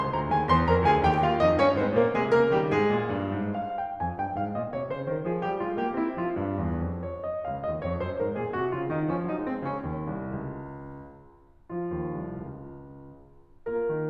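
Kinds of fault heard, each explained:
No technical faults can be heard; the music signal holds steady throughout, with no level or timing disturbances.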